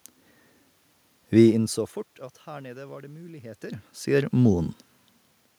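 No technical faults can be heard in this speech recording. A steady bed of room noise sits under the voice throughout, and the level at the microphone shifts around 1.5 s and again around 3.5 s, as when a talker leans back or comes closer.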